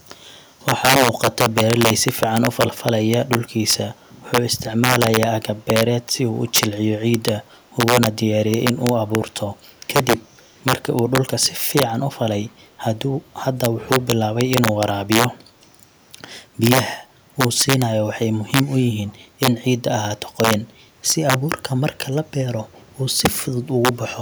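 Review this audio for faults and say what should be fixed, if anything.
Integer overflow runs through the whole clip. The loudest speech peaks are driven about 9 dB past the integer limit, and a small fraction of samples, around half a percent, cross it. Those samples do not clip. They wrap to the opposite extreme, so each overshoot becomes a full-range jump heard as a sharp crack, much harsher than ordinary clipping. Prevent it by using saturating arithmetic or a limiter before conversion to integer, and by reducing gain so peaks stay under full scale.

Echo leak appears briefly at 6.47 to 6.52 s and again at 19.08 to 19.16 s. A faint delayed copy of the speech, 242 ms behind, is audible as short scraps, around 30 dB below the speech the first time and around 35 dB below the second time. The likely cause is a far end on loudspeaker whose echo canceller let some of its microphone pickup through and sent it back. 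Prevent it by improving echo cancellation convergence at that endpoint or having that side use a headset.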